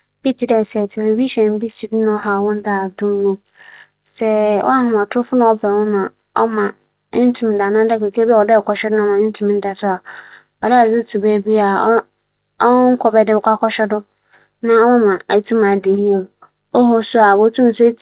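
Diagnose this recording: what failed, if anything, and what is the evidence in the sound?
Nothing in the recording points to a failure at any stage: the speech comes through a working call path whose band stops at 4 kHz, which fits narrowband G.711 A-law coding at 64 kbps, and that ceiling is the normal character of such a link rather than a defect.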